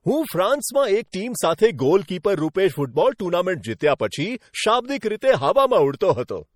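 Speech throughout sounds watery and swirly, with smeared consonants and chirpy sibilants, likely from MP3 compression at a low bitrate around 48 kbps starving weak frequency lines. Pre-echo puts a brief hiss just ahead of sharp attacks at 2.23 s, 2.53 to 2.55 s, 3.18 s and 5.20 s, because quantisation noise spreads across each block and fills the quiet before the onset.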